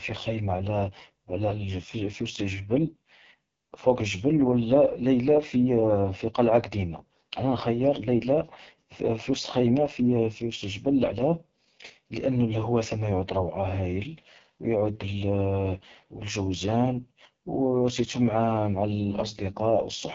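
Speech passed through the AMR wideband (HD Voice) codec at a very low rate for the full clip. The heavy rasp points to its lowest mode, about 6.6 kbit/s, where the pulse-driven vocal model roughens speech and nothing remains above 7.2 kHz.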